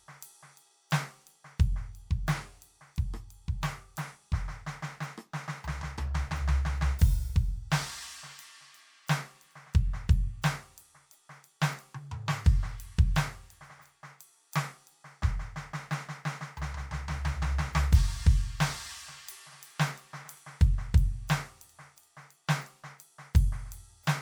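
No technical faults can be heard anywhere in the music.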